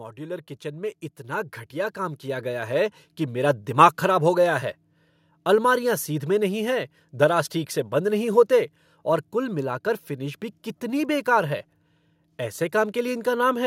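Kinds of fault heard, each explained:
Automatic gain rising: From 0.15 s to 3.66 s the level of the speech climbs steadily, by about 12 dB in all. The background noise rises with it at the same rate. That shared swell is the sign. An automatic gain control judged the input too quiet and turned its gain up slowly, over several seconds rather than at once. The climb ends just before "दिमाग खराब हो गया", which is heard at the raised level.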